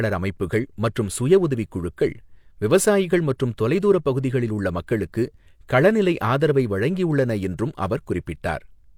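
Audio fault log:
No fault in this speech clip.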